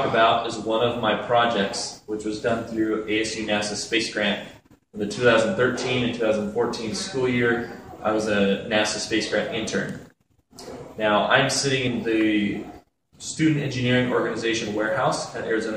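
At 3.97 s there is a single skip. The sound jumps forward with no gap of silence, so the material on either side is butted together. Roughly a twentieth of a second seems to be missing. This is audio missing between chunks. The likely cause is a recorder or processor handling the signal in blocks of about 4 s and dropping a short slice while it closes one block and opens the next.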